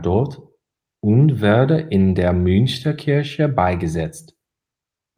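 No technical faults are audible.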